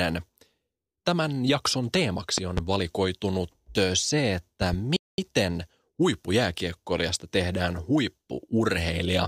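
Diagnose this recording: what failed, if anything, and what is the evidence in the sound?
Two sharp double pops cut through the speech, the first at 2.38 to 2.60 s, peaking about 15 dB above the voice, and the second at 4.62 to 4.76 s, about 10 dB above it. The speech carries on underneath both. These are loud pops, likely voltage pulses entering the analogue wiring from a connector, switch or static discharge.

A playback stall follows at 4.96 s: the speech stops mid-flow and stays silent for about 216 ms before sound returns at 5.18 s. At the playback stage, the player likely ran out of buffered data or had its thread blocked.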